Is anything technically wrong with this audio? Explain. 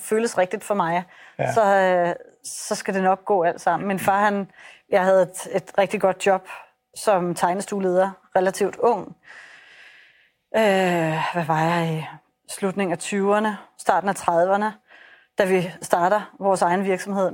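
No, nothing technically wrong can be heard here.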